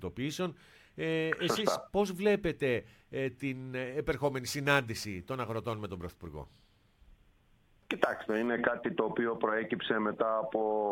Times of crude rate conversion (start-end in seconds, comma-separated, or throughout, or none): 4.12-8.47